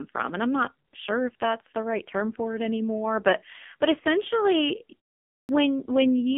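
From the first moment the speech carries the AMR narrowband mobile codec. Nothing passes above about 3.6 kHz, and the line band sits at roughly 200 Hz to 3.5 kHz. The heavy buzzy, synthetic edge points to a low mode near 5.9 kbps, unlike plain band-limiting, which would dull the sound without this vocoder buzz.

At 5.38 s, after a pause of about 0.45 s, there is a clipped start after a pause. The output path is slow to wake, so the first 0.11 s of the speech is swallowed and it bursts in abruptly. Ordinary muted pauses in the gaps fade out and return without losing any speech, but here the opening sounds are actually missing.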